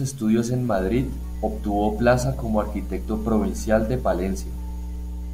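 From 0.77 s to the end of the speech, a steady low tone at 60 Hz sits under everything. That is mains hum: a ground loop or a nearby transformer lets the power line leak into the signal. It is strong, only a few decibels below the speech itself. Because it holds one fixed pitch at the mains frequency and never shifts with the talking, it is clearly hum and not low-frequency rumble or wind noise, which wander and spread across a broad band.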